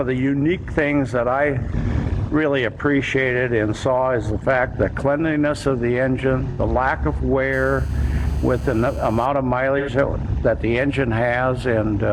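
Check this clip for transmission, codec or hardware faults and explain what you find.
Two kinds of fault are present: AAC frame loss with concealment, heard three times, and GSM phone buzz in one stretch.

AAC frame loss with concealment occurs at 1.80–1.86 s, 6.49–6.60 s and 9.78–9.89 s. The decoder rebuilt missing audio from the last good spectrum, producing brief smeared, phasey patches. The first gap lasts about 43 ms, which fits one lost frame, and the others about 85 ms, which fits two.

GSM phone buzz runs from 7.53 to 9.26 s. A nearby 2G phone's 217 Hz radio bursts were rectified by the audio circuit, giving a steady, raspy, harmonic-rich buzz about 27 dB below the signal.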